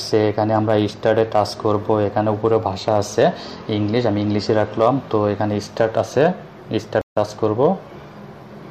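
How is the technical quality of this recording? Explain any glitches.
The recording has one clear glitch, a stream reconnect. At 7.01 to 7.17 s, the connection dropped and a new decoder restarted. The sound goes silent for 140 ms, then jumps ahead about 150 ms.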